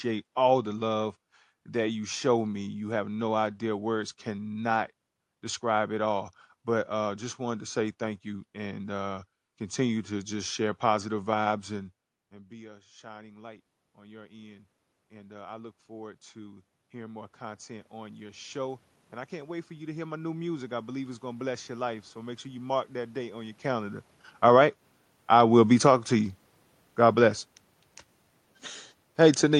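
From 12.16 s, just after "share positive vibes and", the speech and the room noise behind it swell together slowly, over more than ten seconds, until about 25.75 s. This is automatic gain rising. The talker moved back from the microphone at around 11.5 s, dropping the level by about 21 dB. The gain control read that as a quiet input and raised its gain by about 19 dB, lifting the room noise along with the speech.

Starting at 24.3 s, the sound sinks steadily with its background through to the end at 29.59 s. This is automatic gain falling. Around 23.5 s the talker moved again, but the gain was still raised from the previous stretch, so the input suddenly read as too loud. The control then lowered its gain gradually, and the speech and room noise dropped together.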